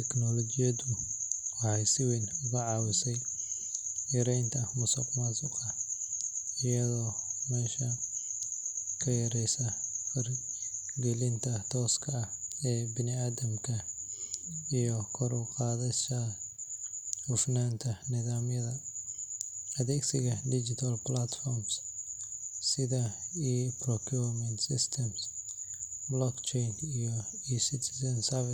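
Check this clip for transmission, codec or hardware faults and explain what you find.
The speech carries one fault, present throughout: low bit depth without dither. Quiet passages and word tails turn gritty, with grainy distortion that rises and falls with the speech and sits about 40 dB below it. The likely cause is samples rounded to roughly 10 bits with no dither, so the error tracks the signal instead of forming steady noise. In the waveform, decays look stair-stepped. The spectrogram shows signal-following hash rather than a flat noise floor.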